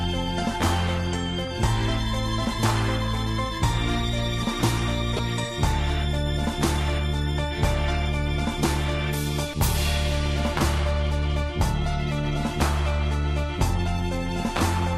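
Throughout, the sounds are dull and lack top end, with a gurgling, granular roughness and upper detail that seems to flicker in and out. This plainly audible damage is likely MP2 compression at a low rate, with the character pointing to around 80 kbps. At that rate, whole high sub-bands get no bits and drop out, and the bands left are quantised coarsely enough to grain.

At 1.45 to 1.48 s, and again at 5.17 to 5.19 s, a brief burble breaks over the audio, with short blips of noise in narrow slices of the spectrum. This is DAB burbling. Bit errors have slipped past the error correction into the MP2 data, corrupting samples across what sounds like a few frames. The error rate suggests roughly 0.1 % for the first event and about half that for the second, which is milder.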